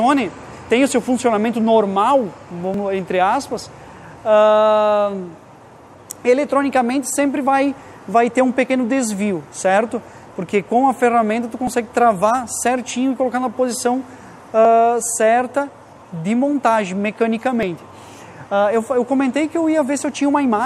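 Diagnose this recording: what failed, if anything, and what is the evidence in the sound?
The capture or processing buffer likely drops a short slice each time it hands off one chunk to the next, which points to audio missing between chunks of about 3 s. Brief skips, each losing about 20 ms with the two sides butted together and no gap of silence, fall at 2.74, 8.70, 11.67, 14.65 and 17.63 s. Their regular spacing of just under 3 s is what gives away the chunk boundaries.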